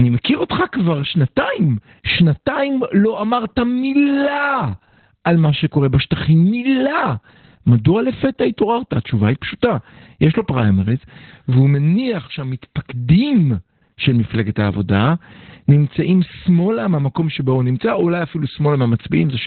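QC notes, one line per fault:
Throughout: Opus voice compression, heavy. The speech is muffled, hoarse and faintly robotic, with nothing above about 4.3 kHz. This points to SILK-only narrowband coding at roughly 8 kbps. At that rate the coder fits each 20 ms frame with a short-term predictor and a coarsely quantised excitation, which flattens breath and buzz detail. On a spectrogram the content stops in a hard shelf near 4.3 kHz, and harmonics look smeared and grainy below it.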